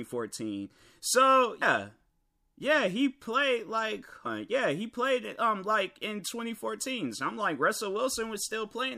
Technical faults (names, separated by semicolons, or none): compressed frames skipped